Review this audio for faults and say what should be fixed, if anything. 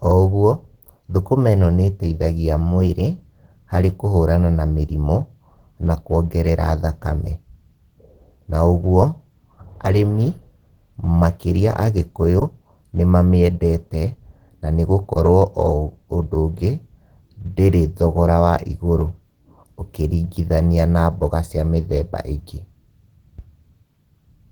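Throughout the speech the sound is hoarse and grainy, with a muffled, rough edge rather than the swirling, holed-out texture MP3 leaves. That points to Opus compression, likely in its hybrid speech mode at a low rate around 16 kbps. The encoder spends few bits per band and fills gaps with noise, so detail turns rough instead of dropping out. Bandwidth stays full, reaching about 20.1 kHz, which rules out a plain low-pass or narrowband codec. Encoding at a higher bitrate would prevent it.

From 2.59 s to 3.27 s speed and pitch rise together, about 5.5% faster and 93 cents sharp, close to a semitone, then snap back. This is a drift correction step, likely from clock-matching software changing the playback rate in one jump to rebalance its buffer. Pitch and speed move together here, unlike a pitch-shifter, and the shift is sudden and brief rather than the slow wobble of wow. Making small, gradual rate corrections instead of a single step would prevent it.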